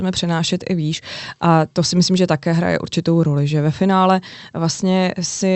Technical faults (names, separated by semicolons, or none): none